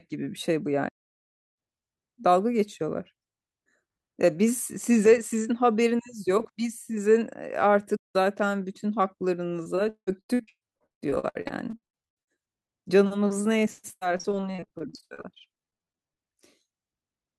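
At 0.88 s the speech halts and stays silent until 1.59 s, a gap of about 0.69 s, then resumes. A second, shorter halt runs from 7.96 to 8.16 s, about 0.18 s. These are playback stalls, likely the player starving for data. Unlike packet loss, nothing fills these gaps: there is clean silence, and the sound picks up again without any smearing.

From 9.63 to 12.39 s, repeated packet loss gives the speech a choppy, robotic quality. Many short holes follow one another closely, each patched by stretching the previous sound, so roughly 40 percent of that span is synthetic fill. The longest hole is 178 ms. A second burst from 13.92 to 16.18 s sounds similar but lighter: about a third of the span is concealed, and no hole is longer than 87 ms. What separates this from a stall is that the gaps are filled and they keep coming, so the result is a choppy stutter rather than silence.

Between those bursts, at 12.67–12.70 s, a single short concealed packet loss of about 20 ms leaves a brief smear or wobble where the decoder bridged the hole. 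Because it is isolated, it passes as a momentary blip rather than a stretch of degraded, robotic sound.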